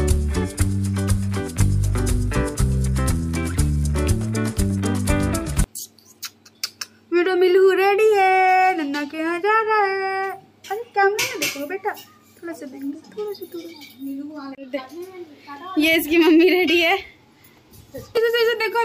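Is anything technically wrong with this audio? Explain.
No, nothing in the signal points to a technical problem; the recording is clean throughout.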